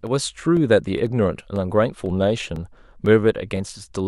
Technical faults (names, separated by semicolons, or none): periodic USB or driver dropouts